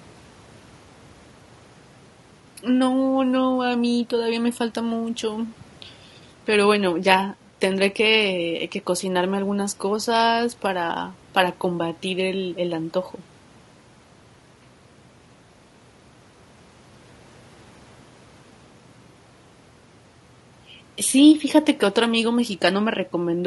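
Throughout the speech, the sound is rough and grainy, with noise filling the gaps between pitch harmonics and a thin, synthetic-sounding top band. The likely cause is low-delay AAC compression (AAC-ELD), whose short frames blur harmonics more than standard AAC's longer frames, which fits a bitrate around 32 kbps.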